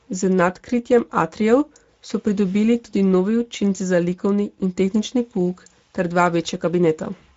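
From start to finish the speech carries Speex codec damage, plainly audible across the whole clip. This CELP coder models the voice as a filtered excitation signal, and with too few bits for that excitation the voice comes out hoarse and grainy. The degree of coarseness fits a wideband Speex mode at around 17 kbps. Nothing sits above about 7.7 kHz, so sibilants and breath noise lose their top edge.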